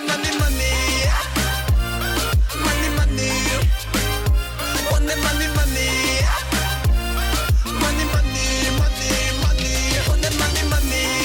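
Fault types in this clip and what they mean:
No fault types are present in this clip.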